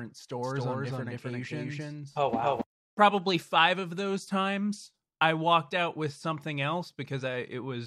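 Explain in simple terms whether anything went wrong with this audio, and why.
From 0.43 to 2.61 s the speech is heard twice, with a second copy just as loud trailing about a third of a second behind and cutting in and out abruptly. This doubled audio track likely comes from the same sound being captured again through a slower path.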